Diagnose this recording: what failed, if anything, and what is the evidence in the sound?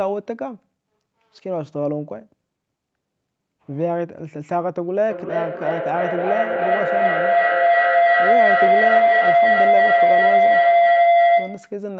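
Feedback howl, 5.09 s to 11.86 s, from an acoustic loop at the playback stage. A tone near 700 Hz swells to about 8 dB above the speech, pulsing roughly every 0.3 s, as two devices in one room re-amplify each other on every pass.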